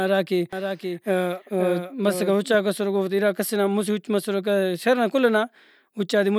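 From 0.53 s to 2.55 s the speech is heard twice: a second, full-band copy trails about half a second behind the original, a few decibels quieter, with no reverberant tail or room colouring of its own. It cuts in and out abruptly at those boundaries. This is a doubled audio track, likely caused by the same signal being captured again through a slower path, or by an edit leaving two out-of-step copies in the mix.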